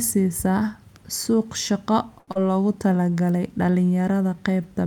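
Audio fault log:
2.19–2.29 s, short stall from a late packet: a packet arrived late and the jitter buffer ran dry, so the receiver held the last sound for 81 ms and then resumed from the same spot. Nothing is lost. The sound is simply drawn out, unlike a gap or a skip.
2.31–2.37 s, short concealed packet loss: 80 ms of audio never reached the decoder, and only 38 ms of synthesized continuation covered it, so the timeline jumps ahead by roughly 40 ms. The result is a brief smear or wobble where a short sound can drop out, rather than a hold.
2.88–3.12 s, jitter buffer slow-down: to rebuild its reserve the receiver repeated single pitch periods and bits of pauses, adding 39 ms and running the sound at 86% speed. The pitch stays unchanged while sounds stretch, spread over about a quarter second instead of one held spot.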